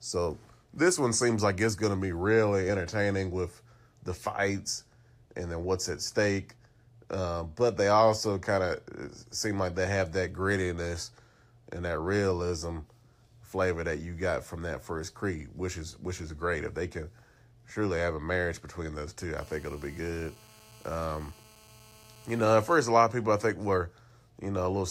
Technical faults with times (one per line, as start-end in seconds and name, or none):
19.38-22.76 GSM phone buzz